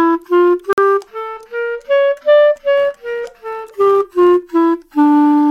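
At 0.73 s the sound cuts to silence for about 49 ms, then resumes, pointing to a likely Bluetooth stall while resent packets arrived. From 2.77 to 4.41 s a block size mismatch (truncated) discards the end of each block, producing a 92 Hz buzz at the block rate. Unlike mains hum, it appears only during this span, and the timing stays at normal speed.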